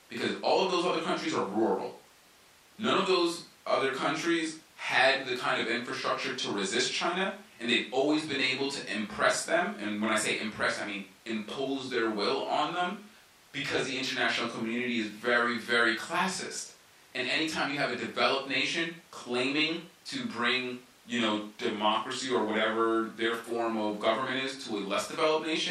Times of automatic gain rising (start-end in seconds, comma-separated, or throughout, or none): none